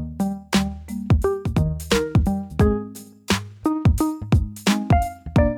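Nothing in the audio stood out as a technical fault on listening.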